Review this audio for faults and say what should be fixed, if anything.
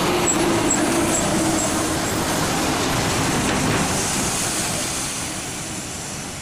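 A block size mismatch (truncated) runs through the whole clip: the tail of each block is discarded, leaving a 50 Hz buzz at the block rate and playback about 1.16 times fast, which fits 1024-sample blocks read short. Match the write and read block sizes between stages.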